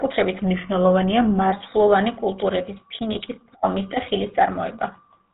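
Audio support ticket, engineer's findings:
GSM full-rate codec across entire clip: buzzy, gravelly speech, nothing above 4 kHz. Regular-pulse excitation keeps only every third sample, driving a vocal-tract filter; roughness plainly audible, consistent with the 13 kbps full-rate coder. Component: GSM speech path.

GSM bit errors, 3.12 to 3.27 s: burst of squawks, pops and gargling, roughly 150 ms. Corrupted filter, pitch or gain parameters distort spectrum and level frame by frame; extent points to several consecutive frames hit on a weak radio link.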